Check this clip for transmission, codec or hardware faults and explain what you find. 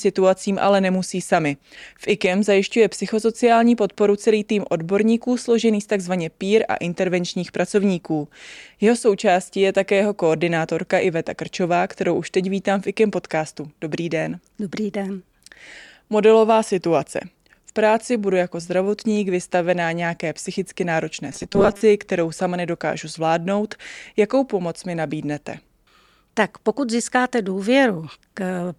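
One fault turns up in the speech, right after "vystavená nějaké psychicky náročné": robotic sound from repeated short buffers, running from 21.32 to 21.81 s and ending just before "kterou sama nedokážu zvládnout". Audio was likely arriving too late, so a 5 ms chunk got looped for about half that stretch. That imposes a 200 Hz buzz, turning the voice metallic and rigid while it still loosely tracks the words.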